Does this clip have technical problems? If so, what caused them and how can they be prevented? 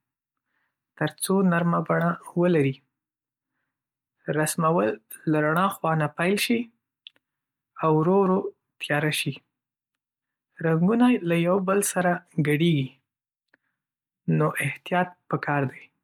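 No, no technical faults can be heard in this speech recording. There is nothing here that calls for a fix or a preventive change.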